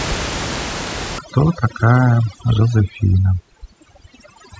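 A speech clip whose room noise sits about 10 dB below the voice, and from 1.19 s to the end it shows overdone noise removal. The reduction is set far too aggressively for that noise level, so individual frequency bands close to the estimated noise floor are pulled right down or gated off, taking the quieter voice components with them. The background drops and breaks up into twinkling, warbling specks.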